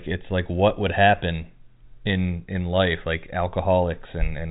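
Nothing stood out on listening to this telephone-band speech, which tops out at about 3.8 kHz as G.711 telephone coding allows.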